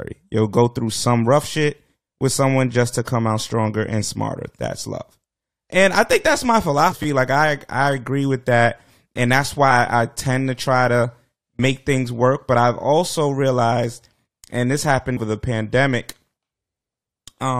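At 6.91 s the speech jumps forward with a quick smeared blip: compressed frames skipped. About four frames, roughly a tenth of a second, never reached the output, either missing or rejected by the decoder. Overlapping frames soften the join, and the step fits frames of about 23 ms.

Right after, from 7.03 to 7.05 s, there's a repeated buffer. New audio didn't arrive in time, so the device replayed its last piece twice more. Each repeat covers about 10 ms, so instead of a stutter you hear a short buzzy click with hard joins.

The same frame skip comes back at 9.70 s, again around four frames lost, heard as a brief smeared hiccup. At 15.16 s a bigger one drops roughly seven frames, about 150 ms, so the jump ahead is more noticeable.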